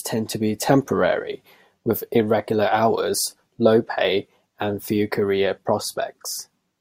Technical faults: none

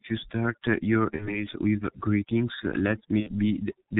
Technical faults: overdone noise removal; G.723.1 codec; VoIP packet loss concealed by the speech codec

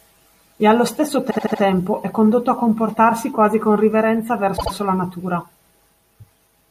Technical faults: repeated frames

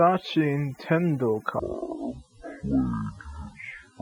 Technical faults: overdone noise removal; section at the wrong speed

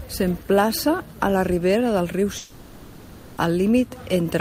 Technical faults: long network dropout

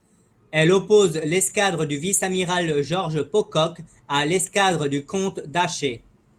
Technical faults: none

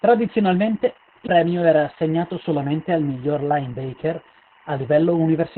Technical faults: timecode bleed; Opus voice compression

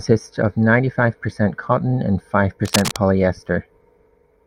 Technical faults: cable scratch noise

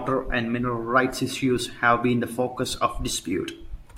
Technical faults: none

